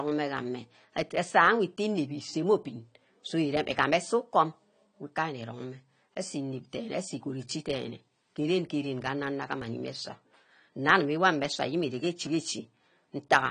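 From start to finish the speech is dull and smeared, with a fizzy, warbling edge on sibilants. Nothing reaches above 10 kHz. This is plainly audible AAC compression, likely AAC-LC at a low rate, which fits about 32 kbps. The encoder discarded high bands and coarsely quantised the rest.

At 9.62 s the sound makes a sudden skip forward. About 5 ms of audio is missing, with no gap of silence. At 12.27 s a similar skip cuts out around 15 ms. Each is likely a dropped buffer (overrun). The samples were overwritten before being read, and the two sides were spliced together.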